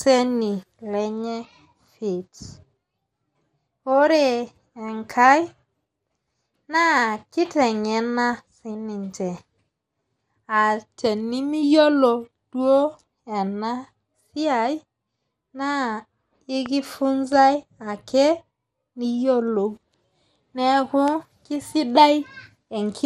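Throughout this speech clip the sound is dull and plainly gurgling, with a granular roughness on the voice and nothing above about 15.9 kHz. This is MP2 compression, likely at a low bitrate that fits about 80 kbps. The encoder divides the spectrum into sub-bands and, short of bits, shuts off the top bands entirely and quantises the remaining ones coarsely, so they flicker and grain. Two loud pops sit on top of the speech, which continues underneath. The first, from 16.66 to 16.68 s, peaks a little above the speech level. The second, from 21.08 to 21.10 s, is clearly louder, reaching well above it. Each is a single sharp click-thump, likely a voltage step or spike from a plug, switch, static discharge or driver glitch, briefly shaped by the circuitry that follows.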